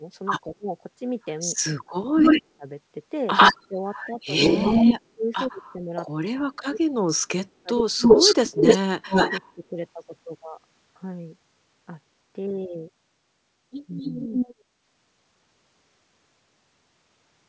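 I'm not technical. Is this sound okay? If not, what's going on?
No. There are two problems, both typical of a call where someone is on a speakerphone.

Speech suppressed in double talk happens from 0.0 to 2.65 seconds, again from 3.68 to 9.77 seconds, and briefly around 14.0 seconds. The voice dips sharply or drops out in pieces, for about a second in total in the first stretch and about three seconds in the second. This likely happened because both sides spoke at once. The call's echo-removal system couldn't tell the talker from the loudspeaker, so it turned everything down.

Echo leak is heard at 2.18 to 2.41 seconds, 3.37 to 4.93 seconds, 8.0 to 9.41 seconds, and 13.98 to 14.61 seconds. A delayed copy of the voice trails behind, fairly loud. The delay is about a tenth of a second in the earlier spots and about a quarter of a second in the later ones. This is likely a speakerphone's microphone picking up its own loudspeaker, with the echo remover missing part of it and sending it back.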